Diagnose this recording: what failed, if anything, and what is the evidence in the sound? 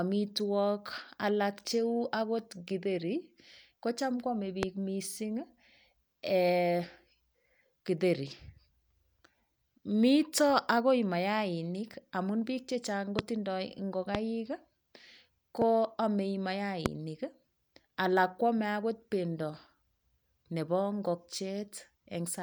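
Five loud pops, each a single sharp click about 20 ms long and far above the speech level, at 4.63, 13.19, 14.15, 15.62 and 16.86 s, with speech continuing underneath. The likely cause is voltage steps in the analogue wiring, from a loose connector or static.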